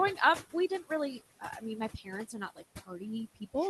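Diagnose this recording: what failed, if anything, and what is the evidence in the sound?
Across the whole clip the background pumps: the room noise, sitting about 14 dB under the speech, drops away in the gaps and swells back under each phrase. These are noise suppressor artifacts from the call-processing stage. The suppressor attenuates, frame by frame, the bands it judges to be steady noise, cutting them by about 18 dB, so the noise floor jumps as its speech/noise decision flips. The top end stops near 12 kHz, which fits Opus at around 20 kbps on a WebRTC call.

Speech is cut by the noise suppressor in three places: 0.44 to 0.91 s, dipping by up to about 18 dB; 1.4 to 1.64 s, by up to about 14 dB; and 1.97 to 3.02 s, by up to about 18 dB. In the first two only brief stretches sound swallowed or faint, while in the last roughly half a second is lost. The same processing stage is responsible. 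Quiet, noise-like speech energy, such as soft consonants and trailing syllables, falls below the suppressor's threshold and is pulled down along with the background.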